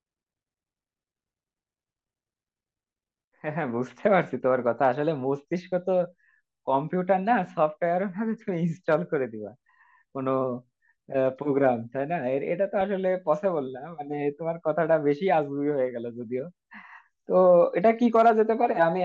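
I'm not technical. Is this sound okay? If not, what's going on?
No, not quite. From start to finish the speech sounds dull and muffled, with a gurgly, grainy roughness on top, a bit like listening to weak digital radio. That's most likely MP2 compression squeezed too hard. This older format splits the sound into many narrow slices and shares out a limited data budget between them. Here the budget is clearly too small, so the high, crisp slices get switched off and flicker in and out, and what remains is rendered coarsely.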